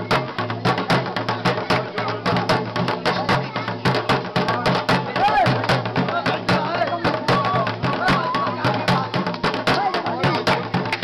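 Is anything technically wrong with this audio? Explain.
No, nothing technically wrong can be heard anywhere in this audio.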